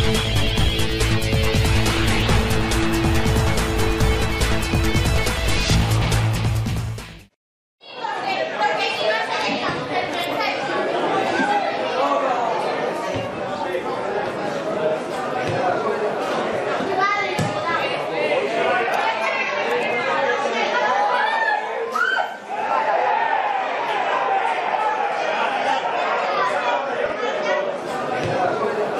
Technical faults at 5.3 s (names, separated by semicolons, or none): none